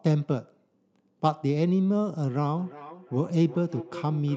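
From 2.57 s to the end of the clip, a feedback echo between two devices sets in: the speech returns at roughly 400 ms intervals, about 14 dB below the direct sound, thinner and ringing, because a second device's microphone recaptures playback its own echo canceller cannot remove.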